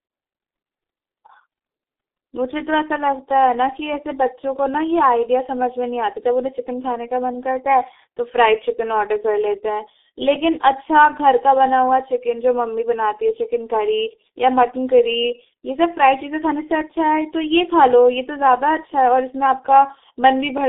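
From start to end the speech carries heavy G.723.1 codec damage, which points to a roughly 6 kbit/s telephony stream. Nothing survives above 3.8 kHz and the line band sits near 250 Hz to 3.6 kHz, so speech sounds muffled and hoarse with smeared consonants. A spectrogram shows a flat ceiling and coarse, blocky harmonics.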